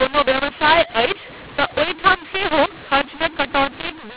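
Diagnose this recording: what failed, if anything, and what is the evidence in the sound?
The G.711 decoder read A-law speech as mu-law, scrambling sample levels throughout: the speech turns harsh and distorted, and the pauses fill with noise.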